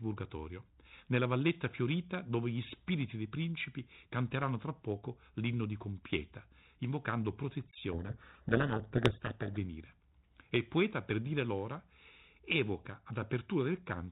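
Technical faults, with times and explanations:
7.92–9.57 s, codec payload misread: the decoder unpacked the G.726 code words with their bits in reversed order, so the speech is buried under harsh, grinding distortion until the packing matches again.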